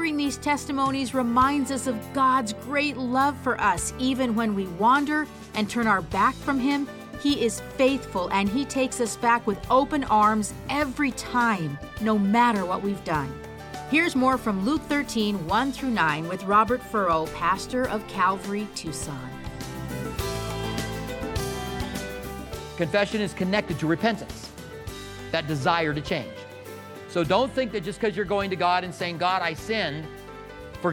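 No technical fault can be heard anywhere in the clip. The audio holds steady throughout, with nothing that needs a time or a cause.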